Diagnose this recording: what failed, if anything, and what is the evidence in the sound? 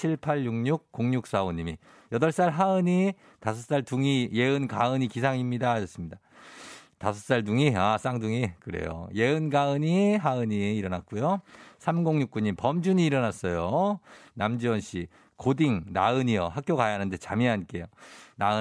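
Nothing failed in this recording; the sound carries no evidence of a fault at any stage.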